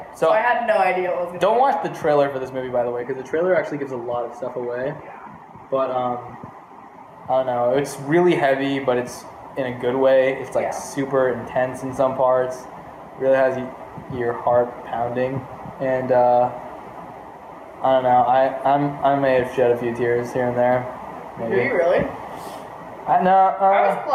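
Gain pumping runs through the whole clip: the level swings by around 10 dB under the loud sounds, leaving the sound squashed. The likely cause is input gain set far too high, with a fast limiter clamping it down. On a waveform the envelope looks flattened, and on a spectrogram the noise floor brightens between loud events.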